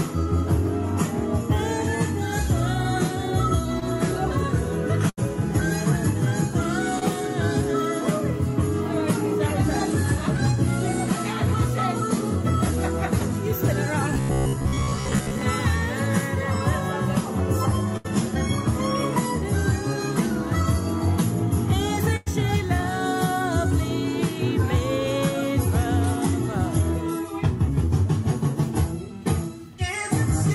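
At 3.79 to 3.83 s there's a short concealed packet loss. About 20 ms of audio never arrived in time, and the receiver patched the hole by stretching the last bit of sound before blending back in. You hear it as a quick smear or wobble rather than a clean gap. The same thing happens again at 6.99 to 7.03 s, another 20 ms patch with the same brief wobble.

Between those, at 5.09 to 5.19 s, is a burst of packet loss, roughly 80 ms gone in one go. The concealment keeps extending the last sound while fading it down, so you get a held buzz or a thinning hiss for a moment, and then the audio picks up further along with that stretch simply missing. Two more bursts follow, at 17.97 to 18.06 s (about 80 ms lost) and at 22.16 to 22.28 s (about 100 ms lost). The last one has the longest droop before the sound jumps ahead.

From 14.14 to 15.42 s the sound turns robotic, with a rigid metallic buzz sitting at about 67 Hz. 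That's likely robotic sound from repeated short buffers: new audio arrives too slowly, so the software keeps looping the last chunk while most of the real material is skipped. A buzz at that pitch points to a repeated chunk of around 15 ms. The overall contour still roughly tracks the original, but it's flattened into that fixed drone.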